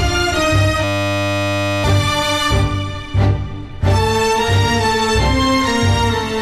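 A system hang loop froze the computer or its audio driver from 0.84 to 1.84 s while the hardware kept replaying one 10 ms stretch of its buffer. The audio becomes a steady 100 Hz buzz, and about a second of the real sound is lost.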